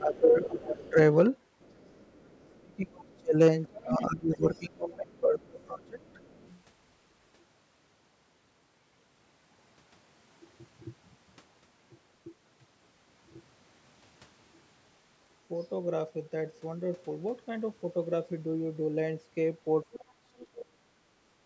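From 0.0 to 0.98 s the speech dips by about 15 dB, speech suppressed in double talk, likely because the echo canceller ducked the talker while the far end spoke. A faint second voice, the other side's voice leaking through at about 25 dB down, appears at 0.81 s. It is a separate talker rather than the main voice fading. More leakage at about 30 dB down runs from 1.6 to 4.6 s. Between 2.24 and 6.2 s the talker is suppressed, with drops near 30 dB, and faint leakage continues from 5.16 to 6.57 s. At 19.92–20.46 s the leak returns at about 25 dB down, and from 19.95 to 21.0 s the talker nearly vanishes, losing about 40 dB. The band stopping at 8 kHz comes from normal call processing.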